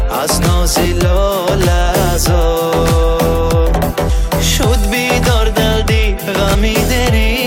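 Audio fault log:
4.08 s and 6.54 s, damaged data in a compressed stream: two brief blips, where corrupted bytes made the decoder misread frames and lose sync before locking onto the next header.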